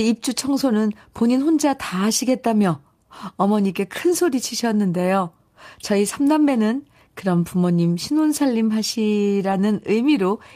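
A lost packet rebuilt from error correction shows up near the end of this speech recording, from 9.51 to 9.53 s. One 20 ms stretch, consistent with a single packet, went missing in transit. The packet that followed carried a low-bitrate backup copy of it, and the decoder played that copy in its place. There is no gap or dropout, but that brief slice sounds rougher and noisier than the speech around it.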